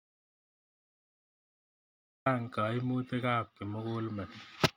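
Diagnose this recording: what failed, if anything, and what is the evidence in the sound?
Audio dropout to silence: the speech clip opens in dead digital silence that continues until 2.26 s, when sound begins abruptly. No room tone or noise floor is present, which sets it apart from a noise gate or a quiet passage. The likely cause is input loss upstream, at the device or link, while the recorder kept writing silence.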